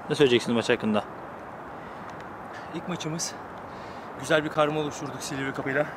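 Damaged data in a compressed stream, from 2.51 to 2.54 s and again from 5.59 to 5.63 s: corrupted frames make the decoder lose sync and hunt for the next header, producing a brief chirping squawk. A block of digital silence at 4.54 s: a 10 ms run of zeros replaced the audio, and the abrupt cut out and back in is heard as a sharp tick.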